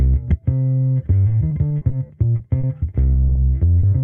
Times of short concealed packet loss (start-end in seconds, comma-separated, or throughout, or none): 3.13-3.37, 3.79-3.85